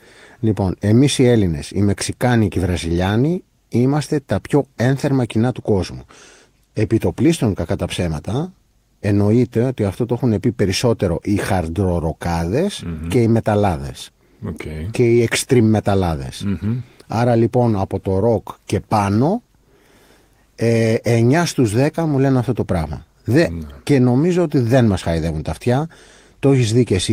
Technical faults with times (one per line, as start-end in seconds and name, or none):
none